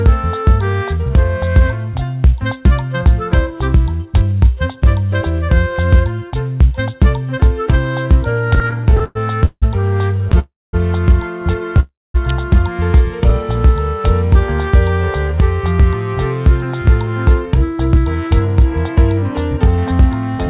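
From 8.5 to 10.35 s the audio falls into repeated stalls (stutter). Packets kept arriving behind the playout rate, so the jitter buffer ran dry about twenty times in under two seconds. Each time the receiver stretched the last sound forward until data resumed, filling about 451 ms in total, roughly a quarter of that span, with the longest hold at 165 ms. Nothing is dropped, but the sound drags and catches in an uneven stutter.

Two call audio freezes follow, at 10.39 to 10.75 s and 11.8 to 12.16 s. In each, the last sound is held as a fading buzz or hiss that dies to silence for a little over 200 ms. Then playback resumes exactly where it stopped, about 340 ms later than before. This pattern points to packets that were likely held up in transit, emptying the buffer. No audio is lost, and a gap is inserted instead.

At 12.3 s a sharp snap or tight cluster of clicks sits on top of the sound. 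It is an electrical switching spike, the kind of brief arc a nearby switch, motor or static discharge likely couples into the audio line. It lasts only about 10 ms.

From 15.14 to 15.95 s and again from 17.07 to 20.38 s there is a jitter buffer speed-up. Having built up more audio than its target, the receiver trimmed short pitch-period slices repeatedly to cut the delay, about 40 ms in the first stretch and roughly 150 ms in the second. Playback runs at 104% speed with pitch unchanged. The whole clip is band-limited with nothing above 4 kHz, consistent with a 64 kbps G.711 mu-law call path.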